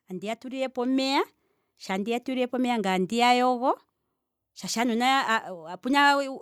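From 0.09 to 1.34 s, automatic gain rising: the gain control judged the input too quiet and lifted it by about 6 dB, so speech and background swell together. On a waveform the envelope widens steadily; a spectrogram brightens evenly across all frequencies.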